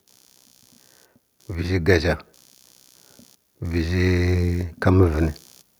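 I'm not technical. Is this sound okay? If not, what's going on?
No. A faint, low buzz runs under the speech from start to finish. This is computer activity noise: the computer's working load is leaking into the audio wiring.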